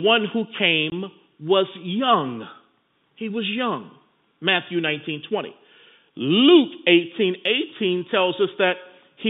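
At 0.90 to 0.92 s the speech drops out for 20 ms, a single hole that fits one lost 20 ms packet filled with silence. On the waveform it shows as a flat gap with abrupt edges, and on the spectrogram as a thin vertical blank band. Those sharp edges give the hole a hard start and stop in the narrowband telephone sound.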